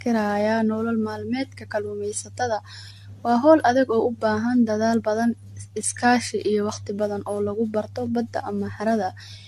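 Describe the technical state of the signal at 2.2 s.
At 2.2 s you're hearing generation loss, present throughout the clip: the speech sounds swirly and hollow, with smeared attacks and nothing above 14 kHz, likely from repeated AAC-LC re-encoding at 64 kbit/s, around seven passes, each adding fresh quantisation noise.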